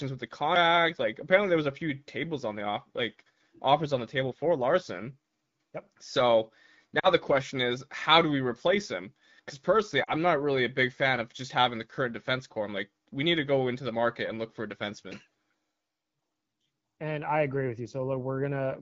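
Lost AMR speech frames break up this speech clip at 6.99 to 7.08 s and 10.03 to 10.12 s. Each gap lasts about 40 ms, which fits two dropped 20 ms frames. Corrupted radio frames failed their checksum, so the decoder carried forward the last good pitch and vocal tract settings at falling gain. The result is a short smeared sound that drops to near silence within the two frames, with a brief rough onset as the voice resumes over the clear 12.65 kbit/s wideband coding.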